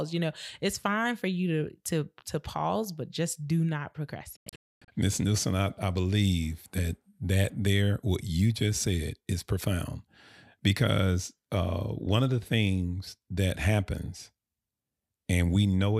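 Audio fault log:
4.36–4.88 s, digital broadcast dropout: the speech cuts abruptly to silence in several short holes totalling about 0.42 s, the longest 256 ms, as the receiver muted failed frames.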